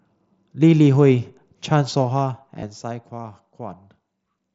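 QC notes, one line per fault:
2.60 to 2.62 s, concealed Bluetooth headset packet loss: a brief run of lost voice packets between headset and phone, about 22.5 ms in all, which fits three consecutive mSBC frames going missing. The receiver bridges the hole by repeating the closest-matching stretch of the preceding waveform, so instead of a dropout there is a short buzzy, steady-level tone, then a slight warble as real speech resumes, heard through the wideband mSBC headset link.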